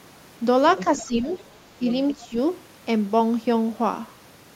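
Other side's voice leaking through appears in this speech clip from 0.72 to 1.01 s and again at 1.31 to 1.37 s: a faint second voice, about 15 dB and then about 20 dB below the talker, likely loudspeaker sound the echo canceller left in the microphone signal. Speech suppressed in double talk follows at 1.03 to 1.29 s, 1.79 to 1.86 s and 2.13 to 2.37 s, where the talker's level sinks by a few dB at first and by about 15 dB in the last stretch, likely because the canceller, faced with both sides at once, turned everything down.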